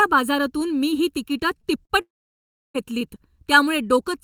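Speech heard through a fixed hollow, phasey colour: channel delay (comb filtering) from one channel running under a millisecond late before a mono sum, with evenly spaced notches from around 700 Hz that never move, unlike a sweeping flanger. Short concealed packet loss shows as brief smears at 1.61–1.65 s and 1.85–1.91 s, each patched with continued sound and rejoining quickly. At 2.01–2.76 s the gap is far longer: a quickly fading fill, then about two-thirds of a second of silence before speech resumes with that stretch lost, most likely a long network dropout.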